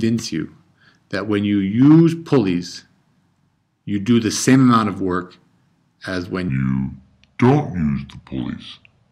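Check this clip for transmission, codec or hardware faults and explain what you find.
One fault stands out: a section at the wrong speed. From 6.49 s to the end, the audio plays at about 0.75 times its original rate, so it drags and drops by roughly five semitones. The likely cause is playback or an edit running against a mismatched clock. On a spectrogram the harmonics shift downward and stretch out in time at 6.49 s, and the waveform's features spread wider.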